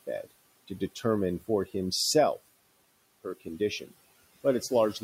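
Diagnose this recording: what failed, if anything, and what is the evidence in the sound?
The failure is in call processing: speech cut by the noise suppressor. Between 0.68 and 1.05 s, just before "for himself her condition", short stretches of low-level speech, around a tenth of a second in total, drop away by up to about 10 dB and sound swallowed. The suppressor misjudged these quiet portions as noise and attenuated them along with the room noise, which sits about 21 dB below the speech.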